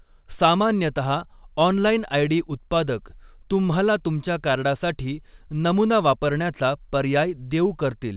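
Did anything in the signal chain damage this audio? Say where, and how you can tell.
No, the speech shows no damage from the chain, only the expected narrowband character of a call path, with no content above 4 kHz, which fits G.711 mu-law coding at 64 kbps.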